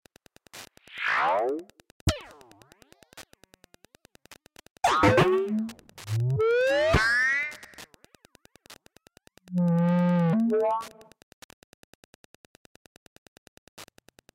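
Wi-Fi interference runs through the whole clip: a nearby radio's beacon, sent every 102.4 ms, is rectified by the audio circuit into a steady ticking just under ten times a second, roughly 30 dB below the sound. Waveform and spectrogram show evenly spaced, thin broadband vertical spikes.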